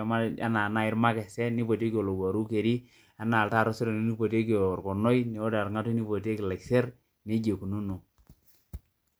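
No technical faults can be heard anywhere in this recording.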